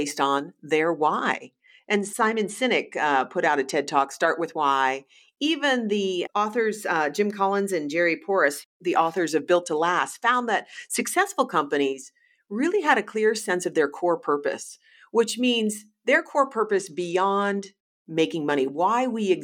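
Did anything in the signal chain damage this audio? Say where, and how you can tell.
Yes, a Bluetooth SBC bit pool drop at the codec stage, at 0.98–4.10 s, 9.61–11.13 s and 16.67–17.93 s. The speech turns dull and gritty. On a spectrogram the top bands thin out and grainy noise fills those below, consistent with the bit pool falling from 31 to 14, near 99 kbps.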